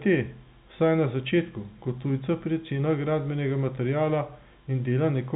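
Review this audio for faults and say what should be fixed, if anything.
Nothing needs fixing; no faults are audible.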